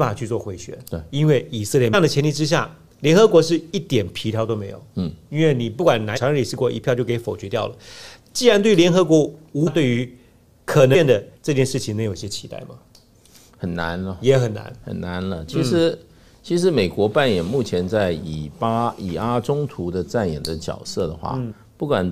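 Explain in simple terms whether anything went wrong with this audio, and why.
Damaged data in a compressed stream causes brief blips at 1.93 s, 6.16 to 6.18 s, 9.66 to 9.68 s and 10.94 to 10.96 s. Each time, part of the compressed file was wrong, so the decoder stumbled, lost its place and skipped ahead to the next readable chunk.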